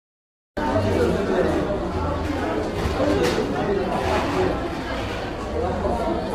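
The audio opens with digital silence until about 0.57 s, then enters abruptly mid-sound. This is a cut-off start: the capture began late, so the sound has no natural attack or fade-in and arrives already in progress, with a hard edge at the join.

Throughout the clip the sound is heavily rough and grainy, with noise filling the gaps between tonal components and a thin, artificial-sounding top band. This points to low-delay AAC compression, likely AAC-ELD at a low bitrate around 24 kbps. Its short frames resolve harmonic detail poorly.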